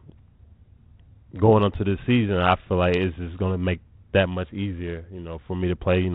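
Nothing stood out on listening to this speech, which comes through the 32 kbit/s G.726 telephone path with only light coding texture and nothing above 4 kHz.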